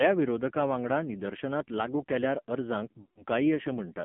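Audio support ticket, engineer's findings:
AMR narrowband mobile codec throughout: band limited to 150 Hz to 3.4 kHz, heavy buzzy, synthetic texture; damage level fits the low 5.9 kbps AMR-NB mode.

Lost AMR speech frames, 3.02 to 3.24 s: sound smears then fades out, about 140 ms missing; decoder repeating last good frame parameters with decaying gain.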